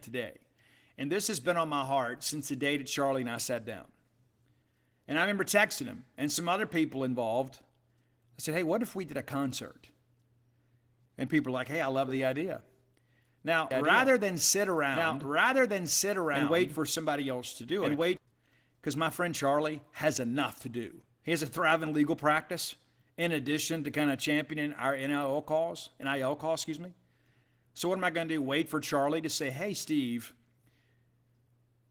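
Opus voice compression runs through the whole speech clip, and its damage is plainly audible. The codec is working in hybrid mode, with a linear-prediction layer coding the band below 8 kHz and a transform layer above it. The coarse excitation coding leaves the speech hoarse, slightly muffled and faintly robotic. That points to a low bitrate of around 16 kbps, with audio handled in 20 ms frames.

A doubled audio track appears from 13.71 s to 18.17 s. A second full-band copy of the speech plays about a second and a half behind the original, at roughly the same loudness. It has no decay or room colour, so it sounds like an overlapping duplicate rather than an echo, and it cuts in and out abruptly at both ends. The likely cause is a second capture through a slower path being mixed in.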